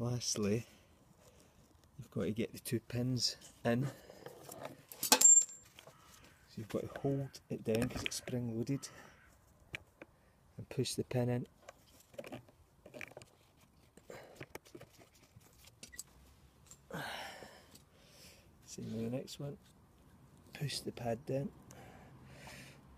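From 13.08 to 16.20 s the sound suddenly races at 1.9 times speed, rushed with its pitch unchanged, likely a time-stretched section squeezed by dropping short pieces.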